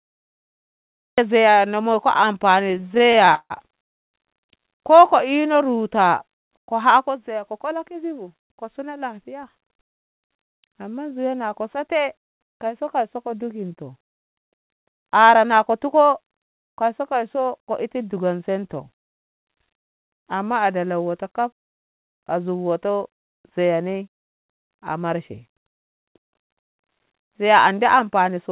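The clip opens with a cut-off start: digital silence until 1.18 s, then the speech begins abruptly in the middle of a sound with no natural attack, because capture began late.

From 2.64 to 3.52 s come repeated stalls (stutter). Eighteen brief holds, the longest 157 ms, stretch the last sound again and again and fill about 41% of that span. Nothing is lost, but the speech drags in jerks rather than stopping once.

At 3.84 s a call audio freeze puts a single 255 ms gap into the speech, almost entirely silent. It is likely caused by packets being held up in transit. The speech then resumes where it stopped, unlike the stutter's many short holds.

A jitter buffer slow-down runs from 5.28 to 6.28 s. Repeated pitch periods add 93 ms, so the speech plays at 91% speed with its pitch unchanged. It sounds drawn out rather than broken.

A jitter buffer speed-up occurs four times:
8.23 to 10.32 s at 106%
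15.16 to 16.09 s at 108%
22.89 to 24.71 s at 108%
26.00 to 28.51 s at 105%

Each time, small pitch-period slices are cut, well under a fifth of a second in total, so the speech sounds hurried but not higher. All of this plays through a narrow band with nothing above 4 kHz, which fits G.711 mu-law.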